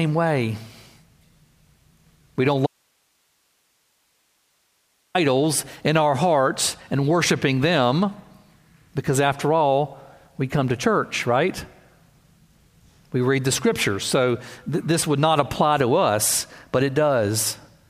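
At 2.67 s the speech cuts off abruptly and does not return until 5.15 s, a gap of about 2.5 s. This is an audio dropout to a faint residue. The gap holds only steady hiss, roughly 45 dB below the speech, so the path after the break likely stayed live while the wanted signal was lost upstream. A natural pause would leave room tone and breathing, and a fade would taper. Here both edges are hard switches.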